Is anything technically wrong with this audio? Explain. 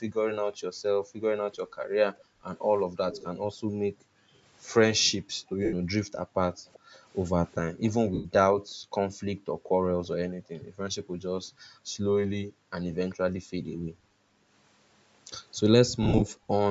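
Yes. Three kinds of fault are audible in this speech clip.

Background gated by the echo canceller: the room sound sinks and drops out in patches from 0.07 to 4.42 s, 5.07 to 6.93 s, and 7.7 to 14.48 s, then briefly at 16.37 to 16.51 s. The longer spans hold roughly 2, 1.5 and 4 seconds of dips, and the short final one about 0.15 s. The drops reach about 40 dB, and about 32 dB at the end. An echo canceller pulled the microphone down hard while far-end audio was playing and let the background back in when it released.

Echo leak: a faint delayed copy of the speech trails the original by about 0.39 s at 3.12 to 3.38 s, about 15 dB below the speech. It returns at 6.73 to 7.91 s at about 25 dB down, and as a short scrap at 13.09 to 13.15 s at about 30 dB down. It is most likely the far end's loudspeaker sound reaching its microphone and getting past that side's echo canceller, so the call was sent back with a constant delay.

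Lost LE Audio frames: at 5.65 to 5.74 s (75 ms) and 8.14 to 8.26 s (105 ms), the speech turns into a short noisy smear and fades instead of continuing cleanly. Between 16.02 and 16.23 s there are scattered dropouts totalling 105 ms, the longest about 50 ms. Bluetooth LE Audio packets went missing, and the LC3 decoder filled each gap by reusing the last spectrum with random signs, fading it as the loss went on.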